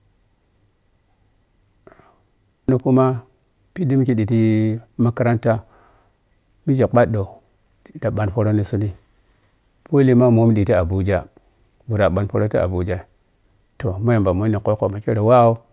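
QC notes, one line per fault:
No faults heard anywhere in this speech recording.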